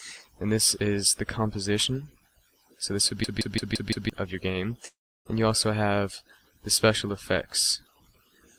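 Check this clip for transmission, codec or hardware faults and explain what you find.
Two faults are audible: a system hang loop and a gap consistent with a long network dropout.

From 3.24 to 4.10 s there is a system hang loop. The host or driver stalled while the audio hardware kept replaying the same ring buffer. A 170.67 ms segment repeats exactly five times, a stutter at about 5.86 Hz, which fits an 8192-sample buffer. When playback resumes, roughly a second of the original audio has been skipped.

From 4.87 to 5.27 s, the sound abruptly smears into a fading fill and then drops to near-silence for about 300 ms. It resumes with about 380 ms of material missing. The likely cause is a long network dropout: no packets arrived, so the receiver extended the last audio with concealment fill before giving up, then picked up the stream at the current position.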